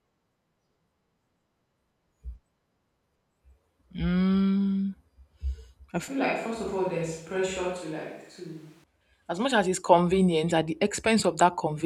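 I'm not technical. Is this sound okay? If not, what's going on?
No. From about 6.08 to 8.84 seconds, the close microphone's signal likely dropped out and the recording fell back on a microphone further away, a switch to a distant microphone. Right at "as much as it's", the speech suddenly turns hollow and roomy, loses its warmth, gets noticeably quieter, and more background noise and room sound creeps in. At about 8.84 seconds, the close sound snaps back just as abruptly.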